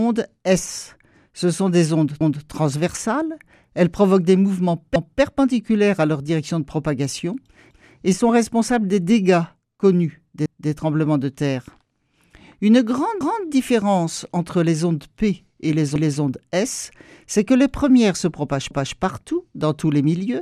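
Overlapping chunks stutter at 2.21, 4.96, 7.71, 10.46, 13.21, 15.96 and 18.71 s. Each 2.5 s chunk begins 0.25 s before the previous one ended, so that quarter-second plays twice. Unlike dropouts, nothing goes missing, and the repeats recur at an exactly regular spacing.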